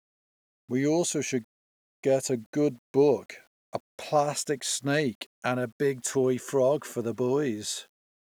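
Throughout the speech, a grainy, gritty distortion follows the signal and changes with it, worst in the quietest stretches. The likely cause is low bit depth without dither: rounding that fits 9 bits leaves error around 40 dB below the signal.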